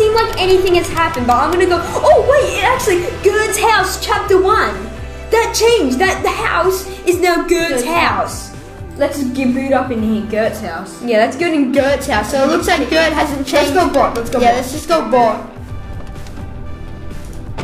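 From 11.70 s to the end at 17.63 s, the sound picks up periodic clock jitter: the converter's sample clock is being wobbled at around 1 kHz, adding a rough, metallic edge. A spectrogram shows sideband copies about 1 kHz above and below each component, strongest on high frequencies.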